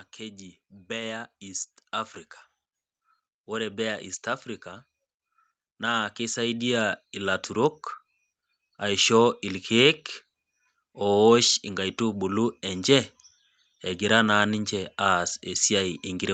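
From 3.45 to 9.11 s there's automatic gain rising: the gain control decided the speech was too quiet, so voice and background swell together by about 12 dB.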